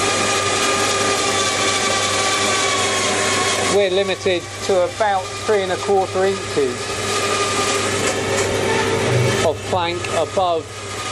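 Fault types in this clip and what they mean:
Compressed frames skipped: at 8.50 s about one frame of the compressed stream is never played, lost from the file or rejected by the decoder, so the sound jumps ahead roughly 30 ms.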